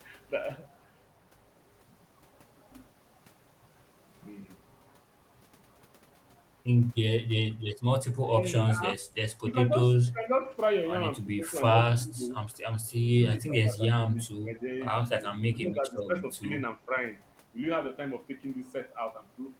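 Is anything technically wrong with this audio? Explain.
Yes. Two faults show up from about 8.3 s on in this speech clip.

Speech suppressed in double talk, at 8.31–9.0, 9.47–10.55, 11.39–11.46, 11.87–12.35, 13.09–14.63, 15.51–16.44 and 16.77–16.94 s. Both ends were likely talking at once, and the echo canceller, unable to tell this talker from returning loudspeaker sound, turned everything down. The voice dips and thins in patches, by roughly 5 to 20 dB, with the deepest cuts near 13–14.6 s.

Echo leak, at 14.18–14.22 s. A far-end loudspeaker's sound reached its microphone, and that echo canceller likely failed to remove all of it, so a faint copy of this voice came back about 0.35 s late. It is very quiet, around 35 dB below the speech, and heard only as a brief scrap.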